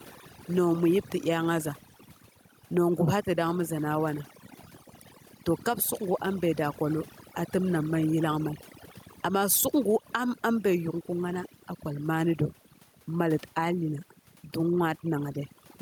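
Speech runs the whole way through, with the gaps between phrases falling to near silence dotted with faint twinkling specks. That is overdone noise removal: the reduction was set so hard that any frequency band close to its noise estimate gets pulled down or shut off, taking the quieter parts of the voice with it. The room noise, around 39 dB under the speech, survives only as those specks. The level also breathes, swinging by roughly 5 dB, so loud and soft passages sit squashed together. The likely cause is gain pumping, where input gain set far too high drives a fast limiter or compressor to clamp down on every peak.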